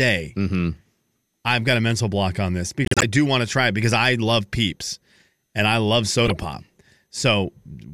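Speech with two stretches of corrupt frames decoded: from 2.85 to 3.04 s, after "mental block on this" and before "do want to try", a loud glitch, then a quieter one at 6.25 to 6.31 s after "peeps and I love". Damaged compressed frames got played anyway, spraying energy into the wrong frequencies.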